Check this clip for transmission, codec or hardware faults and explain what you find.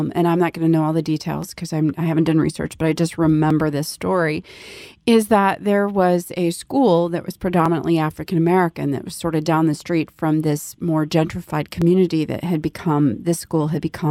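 Clock drift buffer slips recur from 1.43 s, just after "to know all the", every 2.08 s until 13.89 s, about seven in all. They're likely caused by two devices whose clocks differ by roughly 500 ppm, forcing the buffer to drop or repeat a few dozen samples, heard as a regular click.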